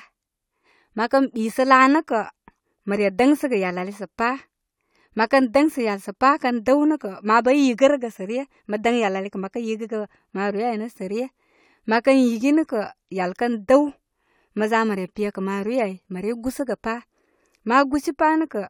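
At 3.19 s the speech skips slightly. This is an overlap between stream segments: overlapping timestamps made the player discard real audio, so the waveform jumps.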